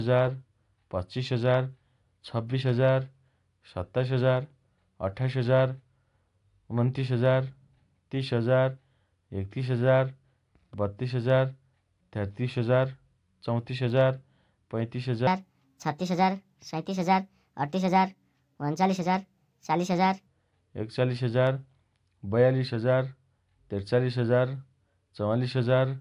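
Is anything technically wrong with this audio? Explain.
Yes. From 15.27 to 20.27 s the speech plays back at the wrong sample rate: it runs about 1.45 times too fast and sits roughly 6.5 semitones higher, which fits 22 kHz audio played at 32 kHz. Unlike a pitch shift or time-stretch, speed and pitch rise together in lockstep.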